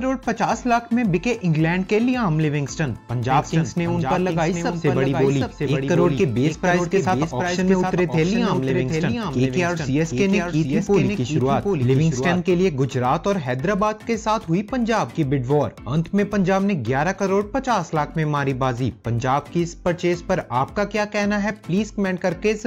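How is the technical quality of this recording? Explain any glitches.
The recording has one clear problem, a doubled audio track from 3.3 s to 12.4 s. The likely cause is a second copy of the signal being captured through a slower path, or an edit that left two copies out of step. A full-band duplicate trails the original by about 700 ms at roughly 5 dB lower level, with no decay or room colour. It produces a dry, distinct echo that switches on and off abruptly at those points.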